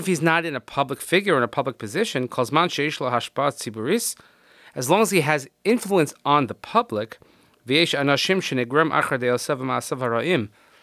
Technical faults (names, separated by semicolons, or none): none